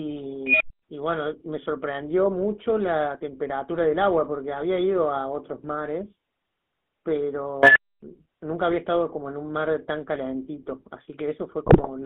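GSM full-rate coding runs through the whole speech clip. The voice has the buzzy, gravelly roughness of the first GSM codec, which fits its 13 kbps rate. That codec models the vocal tract and excites it with a thinned pulse train, and the band sits between 200 Hz and 3.6 kHz. An unstable filter fault appears from 0.47 to 0.83 s. A tone around 3 kHz swells over about 131 ms until it clips, and then the output drops into 230 ms of silence. That pattern comes from a recursive filter whose output grew until the numbers overflowed and it reset. The same unstable filter fault returns from 7.63 to 8.03 s with a lower tone near 1.5 kHz. It builds over about 125 ms and is followed by 270 ms of silence. GSM bit errors hit between 11.66 and 11.89 s, where the voice breaks into squawks and gargling. The damage spans a run of frames that fits about ten consecutive frames, which points to a weak radio link. 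Corrupted filter, pitch and gain values reached the decoder and bent the spectrum and level frame by frame.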